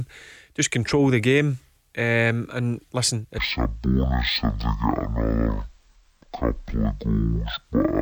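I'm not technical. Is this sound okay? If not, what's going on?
No. From 3.38 s, just after "and listen", the speech slows to half speed and drops a full octave. It sounds deep and dragged until the end. This is stereo read as mono. The left and right samples get played one after another as one channel.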